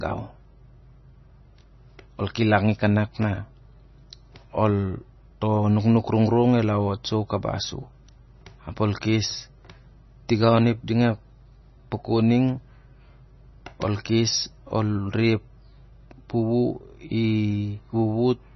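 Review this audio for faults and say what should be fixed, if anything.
Throughout, the speech sounds watery and swirly with nothing above 5.9 kHz, likely heavy MP3 compression at a low bitrate near 24 kbps. On a spectrogram this shows as a flat ceiling with flickering gaps. Prevent it by encoding at a higher bitrate or keeping a lossless copy.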